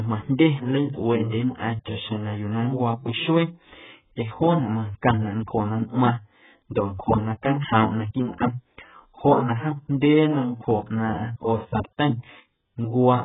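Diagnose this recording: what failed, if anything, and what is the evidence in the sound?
AAC compression runs through the whole speech clip, likely introduced at the codec stage. Nothing is heard above 3.8 kHz, and the heavy smearing and dullness suggest a very low bitrate of around 8 kbps. At that rate the encoder cuts the upper band and coarsely quantises what remains.

Pre-echo occurs twice, from 1.29 to 1.32 s (about 30 ms) and from 1.57 to 1.60 s (about 24 ms). A short hiss arrives just before each attack, which then sounds softened. This is also a codec fault: quantisation noise from the loud transient was spread across its whole block, including the quiet stretch before it.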